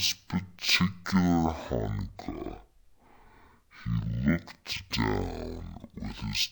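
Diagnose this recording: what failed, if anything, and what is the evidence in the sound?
The failure is at sample-format conversion: a stereo stream was read as mono, its interleaved left and right samples taken one after another as a single channel. Throughout, the speech runs at half speed and sits a full octave low, 12 semitones down.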